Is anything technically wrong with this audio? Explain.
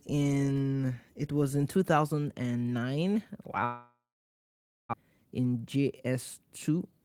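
Yes, there are two faults.

From 3.65 to 4.95 s, likely a long network dropout: sound smears into a fading buzz, then about 0.93 s of flat, near-empty waveform. About one second never returns.

From 5.03 s to the end, a jitter buffer speed-up trims pitch-period slices, running speech at 110% with unchanged pitch. Spectrogram harmonics stay level while syllables crowd together.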